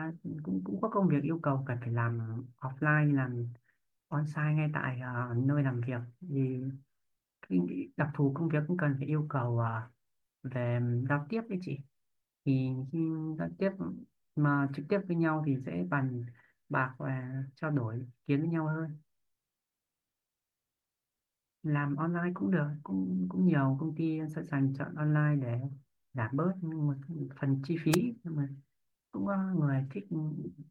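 At 27.91 to 27.97 s there's a wireless microphone noise hit: the FM radio link fades briefly and receiver noise surges through as a quick swish of static over the speech.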